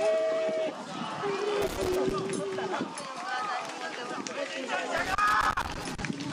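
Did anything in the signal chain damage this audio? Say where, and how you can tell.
Yes, in the analogue wiring: loose connector crackle appears from 1.62 to 2.11 s and again from 4.97 to 6.01 s. A worn contact is making and breaking, chopping the signal into irregular scratchy bursts, unlike the evenly spaced clicks of a buffer or converter fault.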